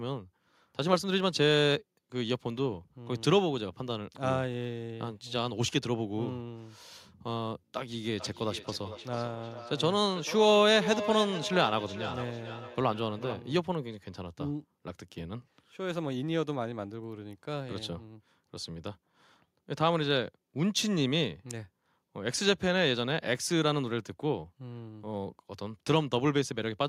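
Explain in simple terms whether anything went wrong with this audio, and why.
Something did go wrong, from about 8.2 to 13.5 seconds: a feedback echo between two devices. It sounds like two devices in the same room were on the call together. One played back what the other's microphone sent, and that microphone caught it again. Each device's echo canceller only cleans up its own playback, so the speech comes back around roughly every 0.4 seconds, thinner and more ringing than the original.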